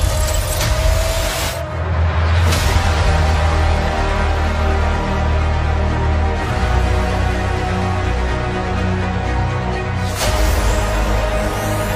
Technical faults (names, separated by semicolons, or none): none